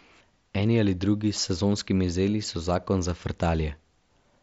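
Nothing's technically wrong with this speech clip, which simply comes over a Bluetooth mSBC headset link with its wideband top end around 8 kHz and the light grain that codec leaves on louder moments.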